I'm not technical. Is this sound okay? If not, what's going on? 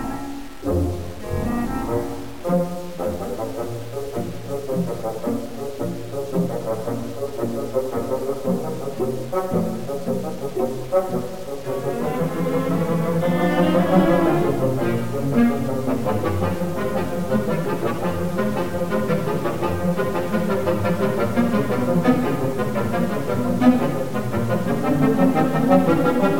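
No, it isn't. Through the whole clip, the sound has a grainy, gritty edge. The grit rises and falls with the sound itself. It is clearest in the quiet parts, which turn rough or sputter instead of fading smoothly. The likely cause is low bit depth without dither. The audio was stored with too few steps of loudness, which fits about 7 bits, and each value was simply rounded off. That rounding adds fairly strong distortion.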